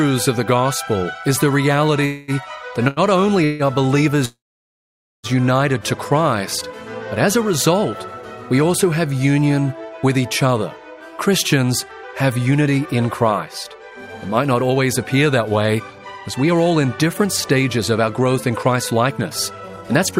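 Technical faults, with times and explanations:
2.05–2.31 s, call audio freeze: the sound stops moving forward for about 0.23 s. The last sound is carried on as a fading buzz or hiss, then the audio resumes exactly where it halted. Nothing is skipped, but a gap has been inserted and the playback now runs about 225 ms later. The likely cause is packets held up in transit, emptying the jitter buffer so the receiver had to improvise until they arrived.
2.88–3.00 s, short stall from a late packet: one sound is held for about 87 ms longer than it should be, with a slight buzz or dip, before the audio carries on from the same point. A single packet missed its playout time, the buffer briefly ran dry, and the receiver stretched what it already had rather than drop anything. The delay grows by that 87 ms.
3.45–3.62 s, call audio freeze: a second, shorter hold of about 0.15 s, again a fading continuation of the last sound followed by a clean resumption with nothing lost, adding about 147 ms more delay.
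4.25–5.27 s, call audio freeze: the longest stop, close to 1 s. The held sound decays quickly and the remaining 0.87 s or so is silent before the audio picks up where it left off. The total delay added here is about 984 ms.
11.28–20.12 s, jitter buffer speed-up: from 11.28 s to the end the audio plays about 10% fast while keeping its pitch, so it sounds hurried. The buffer held more than its target. To bring latency back down, the receiver cut many short pitch-period-sized pieces in succession, taking out roughly a second of audio over this stretch.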